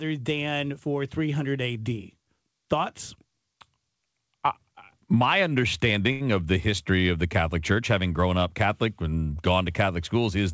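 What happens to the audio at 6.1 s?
From 6.12 to 6.22 s there is a short stall from a late packet: the receiver stretches the last speech for about 82 ms, then resumes without loss.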